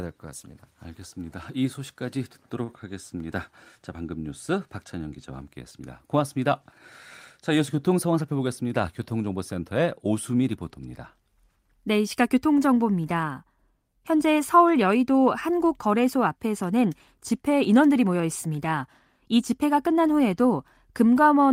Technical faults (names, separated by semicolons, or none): short stall from a late packet; jitter buffer speed-up